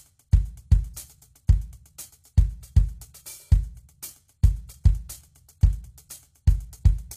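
From start to finish, the music carries plainly audible codec damage, likely HE-AAC compression at a very low rate, around 20 kbps. Nothing comes through above 14.9 kHz, and the top end is rebuilt by copying lower bands upward, so the treble sounds gritty and metallic.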